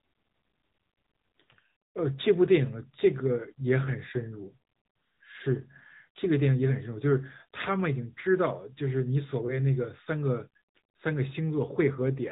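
AMR narrowband mobile codec damage runs through the whole speech clip. The signal has been squeezed through the 2G/3G phone codec, which models the vocal tract and drives it with a few pulses in each 5 ms rather than keeping the waveform. Nothing above about 3.8 kHz survives, so the voice sounds boxed-in and telephone-like. The codec damage is plainly audible as a buzzy, synthetic edge that fits a mid-range mode around 10 kbps.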